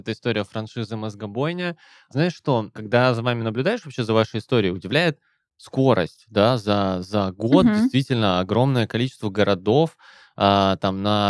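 Nothing in the speech stood out as a technical fault on listening.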